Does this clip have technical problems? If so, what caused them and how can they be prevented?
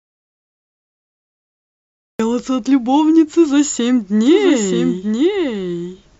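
Yes. An audio dropout to silence is already under way as the clip begins. The sound is silent, with no room tone, until 2.2 s, when the speech enters mid-flow. The likely cause is a lost input while recording continued. Checking connections and mutes before recording prevents this.

From 4.25 s to the end there is a doubled audio track. A second full-band copy of the speech trails roughly a second behind, about 5 dB quieter, with no reverberant colour. It likely comes from a second, slower capture path being mixed in. Monitoring routing so each source reaches the mix once prevents this.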